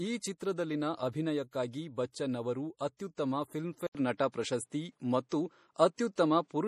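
From start to finish the speech carries plainly audible codec damage, likely MP3 compression at a low bitrate near 40 kbps. Weak frequency components flicker on and off between frames, and on a spectrogram the energy stops sharply at 15.1 kHz, with patchy, speckled holes below that ceiling.

At 3.87 s what is likely an input switched to a poorer device takes over through the end of the clip. An 80 ms gap appears in the waveform, and the level shifts by about 5 dB. On a spectrogram the bandwidth narrows abruptly to an 11 kHz ceiling, and a new noise floor sits roughly 50 dB under the speech. The drop in bandwidth takes the upper range out of the sound from that point on.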